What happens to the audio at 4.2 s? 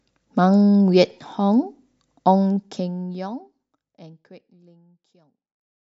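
At 4.2 s the audio is intact, with the level simply easing down as part of a smooth fade-out and no click or hard edge.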